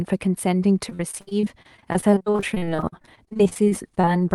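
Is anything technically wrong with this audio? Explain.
Yes. Repeated packet loss (robotic sound) runs from 0.89 s to 4.12 s. Over this stretch the stream keeps dropping short pieces of audio, in more than forty separate gaps, the longest about 60 ms. Each hole is papered over by stretching the last good sound forward, so roughly 29% of the span is synthetic fill. The speech comes out choppy, with fragments missing. The call path's band limit near 12 kHz fits an Opus link.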